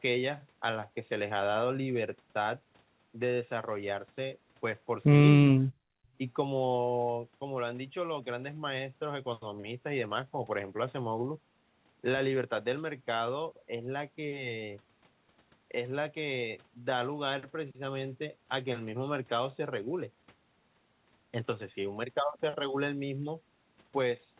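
Speech suppressed in double talk, from 5.51 to 5.62 s: for about a tenth of a second the speech drops sharply, by roughly 40 dB at its deepest, so it nearly vanishes and then returns. This is likely an echo canceller that heard both ends active at once, could not tell the near talker apart from loudspeaker echo, and pulled the level down, briefly gating the speech out. The surrounding audio stays band-limited to 4 kHz, which fits a narrowband G.711 call path.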